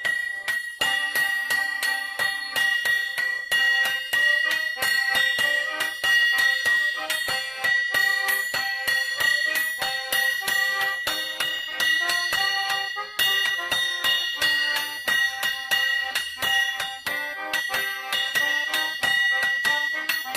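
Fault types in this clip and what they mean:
Nothing stood out on listening to this clip.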